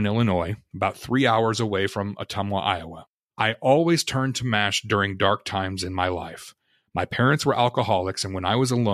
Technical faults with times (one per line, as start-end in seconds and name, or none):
none